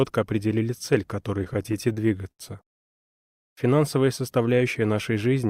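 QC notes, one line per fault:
1.39–2.42 s, repeated stalls (stutter): a dozen short holds, the longest about 75 ms, filling roughly a fifth of that second. Late-arriving packets let the jitter buffer run dry, so playback stretched the last sound, fading it during the longer waits, then resumed with nothing lost. That is why the audio drags and stutters rather than skipping. A spectrogram shows smeared, horizontally extended patches repeating across the span, and the waveform shows brief repeated or decaying segments between normal stretches.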